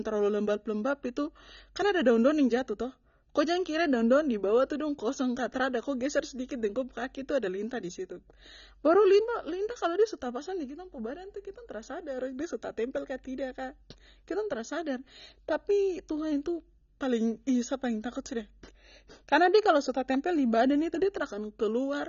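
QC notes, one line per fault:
Throughout: AAC compression, nothing above 6.9 kHz, dull and smeared with plainly audible codec damage on sibilants, which fits a low bitrate near 24 kbps, likely AAC-LC.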